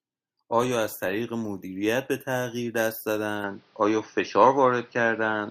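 From 3.44 s to the end, the speech abruptly turns duller and narrower, with nothing above 6.1 kHz, a level shift of about 5 dB and a faint new noise floor, with no gap at the change. This is likely an input switched to a poorer device.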